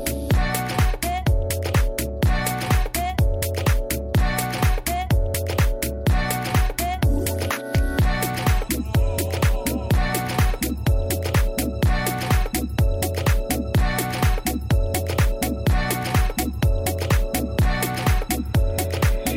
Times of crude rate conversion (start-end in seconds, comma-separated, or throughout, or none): 0.64-2.14